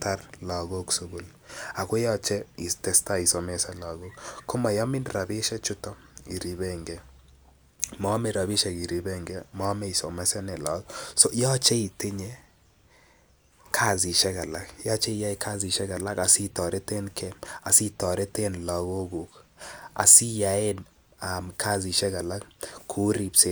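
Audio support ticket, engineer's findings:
Speech level dips abruptly by about 6 dB at 17.57–17.62 s, a brief drop lasting 50 ms, then recovers. Likely one channel drops out upstream of the mono fold-down, e.g. a stereo link, cable or interface input. With one side missing, the shared speech content halves in the sum, giving the 6 dB step. Anything carried on the lost side alone vanishes for the same 50 ms.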